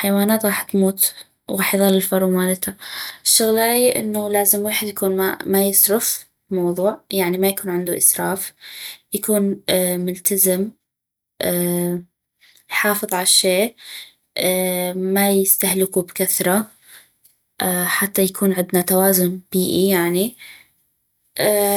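No technical faults are audible.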